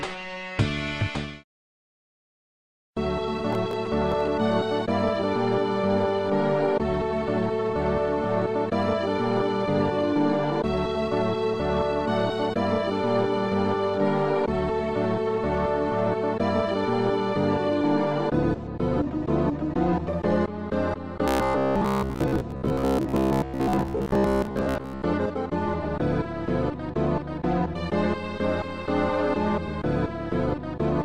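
From 3.53 to 4.27 s there's a burst of processor overload crackle, a gritty tearing laid over the sound. The processor couldn't finish its audio buffers on time, and it missed a run of deadlines back to back. Each missed buffer was simply skipped, leaving a hard-edged hole. The texture fits very short buffers, well under a millisecond, with something like fifteen misses strung together. It stops once the load clears.

Between 21.28 and 25.02 s the sound turns into a rigid, metallic buzz pinned at 66.8 Hz, which is robotic sound from repeated short buffers. It still tracks the shape of the underlying sound loosely. The likely cause is fresh audio arriving too seldom, with the software filling the gaps by replaying the last chunk of about 15 ms. Those repeats take up most of the stretch and force that fixed buzz pitch.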